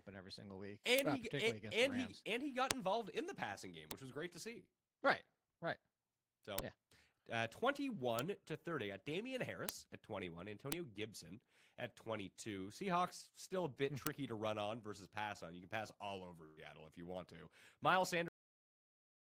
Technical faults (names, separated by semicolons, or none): bit error spike; burst of packet loss; cut-off end